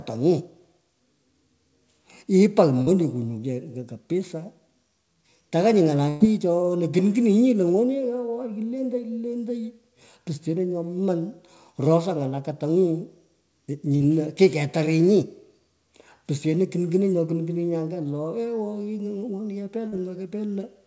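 At 2.82 s there is a short concealed packet loss. About 40 ms of the stream failed to reach the decoder in time, and the receiver bridged the hole by extending the preceding sound for roughly 44 ms before blending back into real audio. It comes through as a brief smear or wobble. The same fault recurs at 13.96 s (about 38 ms filled) and at 19.88 s (about 42 ms filled), each with around 40 ms of audio lost.

At 6.08 s a burst of packet loss removes about 120 ms in a row. Concealment stretches the last sound across roughly 118 ms and fades it as the gap runs on, so a voiced stretch turns into a held buzz and unvoiced material into a decaying hiss. There is no dropout to silence. Speech resumes at 6.22 s with the intervening segment gone. Throughout, the call path's band limit is audible as nothing above 8 kHz, which fits a wideband codec such as G.722.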